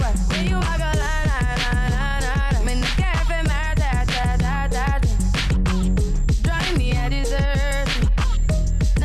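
Nothing stood out on listening; no fault could be heard at any point in the clip.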